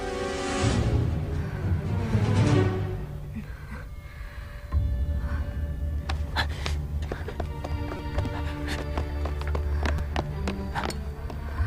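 A repeated buffer fault occurs three times: at 0.83 s with one extra play, at 7.97 to 7.99 s with four, and at 9.98 s with two. Each time, fresh audio failed to arrive and a 5.3 ms piece, which fits a 256-sample buffer, was replayed. It is heard as a click, and the longest as a brief buzz. On a waveform, identical short segments sit side by side with hard steps at each join. A spectrogram shows thin vertical broadband lines.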